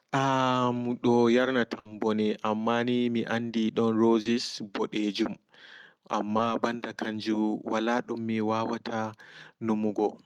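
A speech recording with a burst of packet loss at 1.79 to 1.87 s. About 60 ms is filled by stretching and fading the last sound, then the speech skips ahead. Short concealed packet loss also occurs at 4.21 to 4.27 s, 5.23 to 5.27 s and 6.37 to 6.41 s. Each gap is 20 to 40 ms, patched from the preceding sound and blended back, leaving a brief smear.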